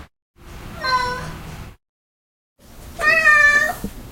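Listening to this recording of sounds, nothing stood out as a technical problem.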